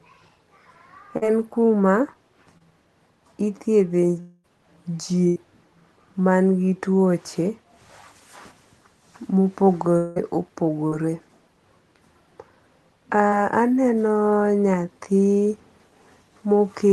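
Speech over a call link whose codec trims the top end near 12 kHz, with several packet-loss faults. Short concealed packet loss, where about 20 to 40 ms of audio arrived too late and the receiver patched over it, appears at 1.17 s (just before "en kuma"), 2.58 s, 10.88 s and 13.28 s as brief smears or wobbles. From 4.20 to 4.46 s and 9.98 to 10.18 s, the sound stretches into a fading buzz and hiss before resuming further on, likely a long network dropout concealed by extrapolation. From 5.28 to 5.38 s, a burst of packet loss lost about 80 ms, which the receiver bridged with a held, decaying continuation before skipping ahead.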